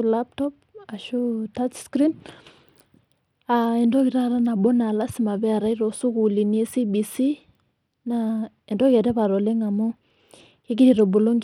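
From start to finish, the speech carries plainly audible damage that points to Bluetooth SBC compression as the likely cause, at a low bit rate consistent with roughly 96 kbps. Starved of bits, the upper bands lose detail and flicker in and out, so sibilants and breath turn thin and unstable while a gritty, grainy noise clings to the voice. On a spectrogram the top region appears patchy, with energy blinking on and off in blocks, and coarse quantisation smears the harmonics.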